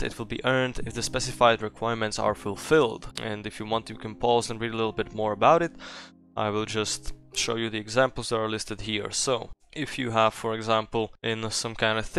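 No technical faults can be heard anywhere in the audio. Nothing in the signal chain draws attention to itself at any point.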